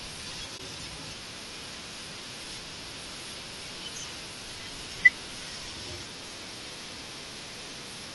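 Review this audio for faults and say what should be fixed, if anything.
Throughout the speech the sound is rough and grainy, with noise filling the gaps between harmonics and a thin, synthetic-sounding top band. The likely cause is low-delay AAC compression (AAC-ELD) at a rate that points to about 32 kbps, where short frames resolve pitch poorly. Raising the bitrate would prevent it.

From 0.57 to 0.60 s the audio fades into a brief dip and back out. This is AAC frame loss with muting: the decoder zeroed a missing frame, consistent with a single frame of about 20 ms, and overlapping windows smoothed the edges. Packet-loss protection or concealment on the transport would prevent it.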